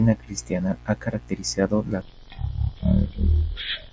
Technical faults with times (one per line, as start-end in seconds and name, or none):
2.02-3.92 wrong sample rate